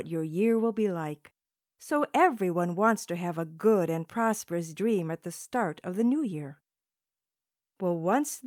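No technical faults can be heard anywhere in the recording.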